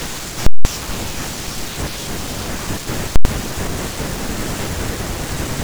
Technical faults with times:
0.46-0.65 invalid numbers at full scale
3.16-3.25 invalid numbers at full scale

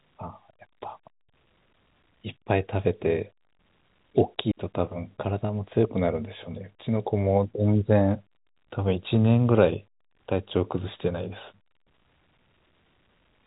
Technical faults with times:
4.51-4.57 digital wireless dropout

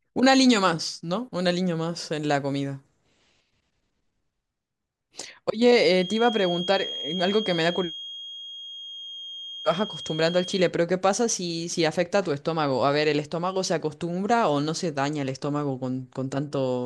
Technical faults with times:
5.89-10.74 feedback whistle

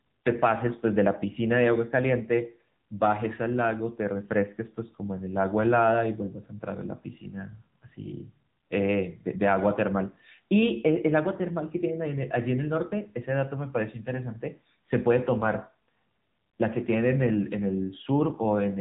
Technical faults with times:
0.00-18.80 AMR narrowband mobile codec

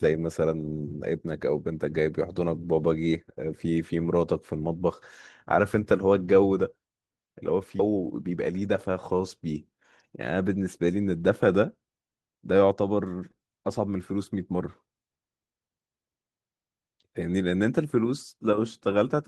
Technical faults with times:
7.79-7.81 skip ahead
7.89-8.95 jitter buffer speed-up

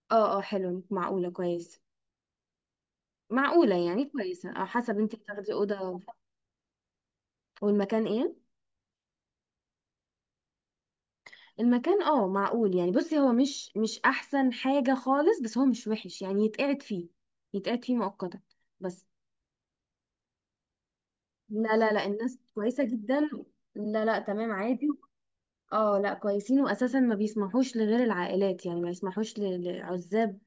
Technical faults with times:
none

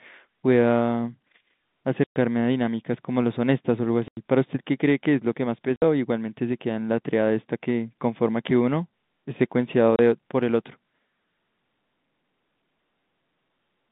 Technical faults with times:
2.04-2.16 packet loss filled with silence
4.08-4.17 packet loss filled with silence
5.76-5.82 packet loss filled with silence
9.96-9.99 packet loss filled with silence

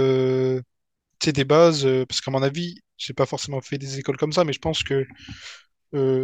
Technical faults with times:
0.00-6.23 sample clock jitter

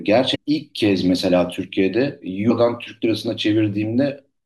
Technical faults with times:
0.34 damaged data in a compressed stream
2.49 damaged data in a compressed stream

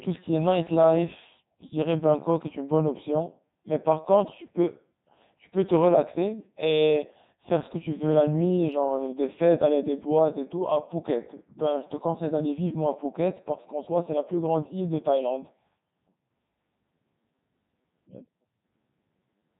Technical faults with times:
0.00-19.60 Codec 2 vocoder

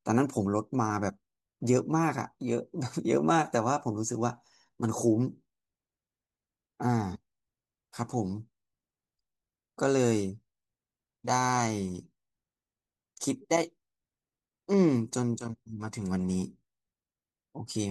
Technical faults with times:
none

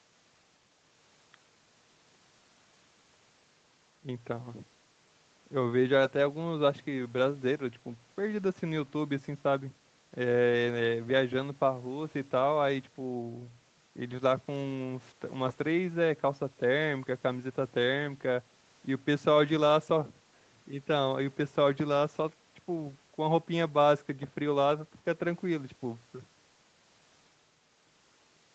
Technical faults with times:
none

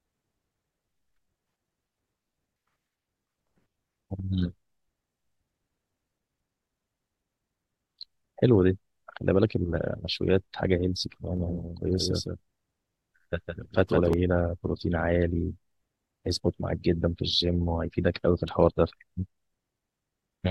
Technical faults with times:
11.37-14.13 doubled audio track

